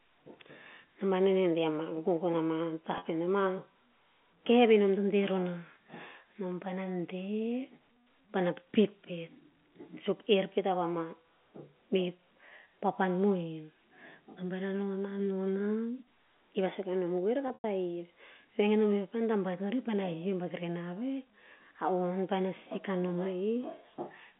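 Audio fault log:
2.98 to 3.02 s and 17.48 to 17.64 s, packet loss with pitch repetition: at 2.98 s about 40 ms of audio goes missing, which fits two 20 ms packets. The receiver fills the gap by looping the last pitch period, so the sound briefly hangs on one buzzy, held tone. At 17.48 s about 120 ms is lost in pieces over 160 ms. The longest gap, 100 ms, outlasts the roughly 50 ms fade of the repeated period, so the sound drops to silence and then cross-fades back in.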